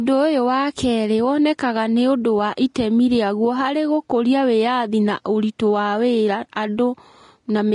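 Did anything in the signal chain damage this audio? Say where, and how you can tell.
Yes. Throughout the speech, the treble sounds hissy and grainy, with blurred attacks. That points to the codec stage, likely Vorbis compression at a rate around 33 kbps.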